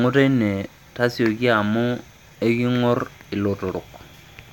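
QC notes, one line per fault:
No fault found, so there is nothing to note for QC.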